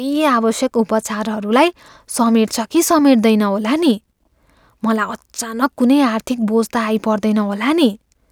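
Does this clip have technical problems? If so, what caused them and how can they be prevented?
No, there are no technical problems in this recording. Since nothing went wrong, there is nothing to prevent.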